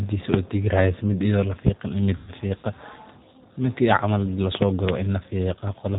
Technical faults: G.729 codec; VoIP packet loss concealed by the speech codec

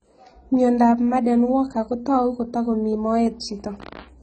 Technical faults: AAC compression

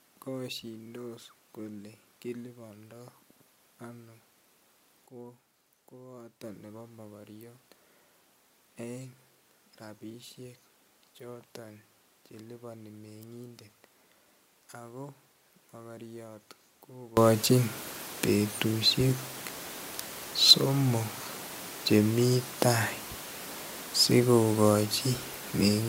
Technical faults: sudden gain jump

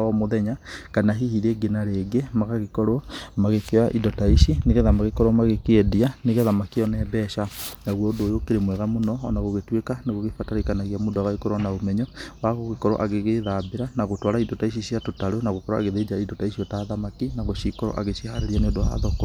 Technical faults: none

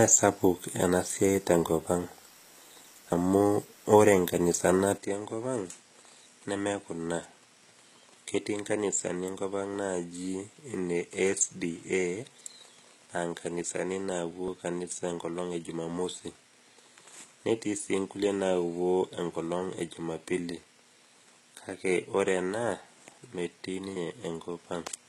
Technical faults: HE-AAC compression; dropped buffer (overrun); input switched to a poorer device

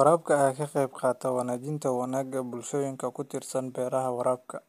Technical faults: none

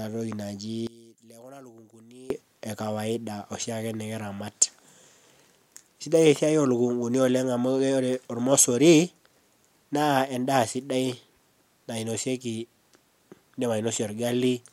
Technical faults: one channel inverted

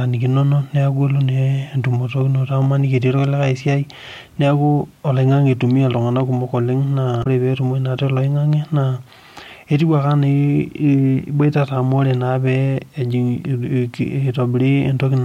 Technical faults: damaged data in a compressed stream

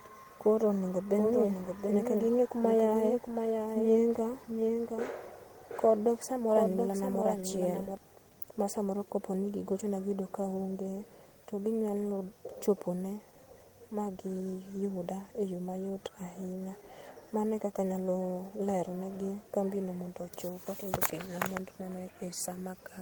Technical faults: doubled audio track

